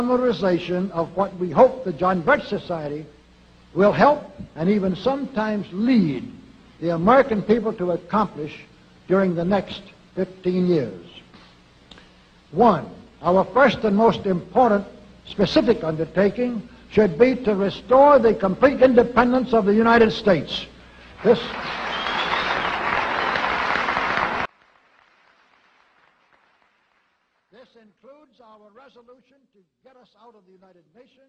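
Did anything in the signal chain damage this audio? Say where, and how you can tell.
Yes: from 24.46 s to the end the sound drops about 35 dB, likely one channel inverted in the analogue wiring, cancelling against its partner in mono.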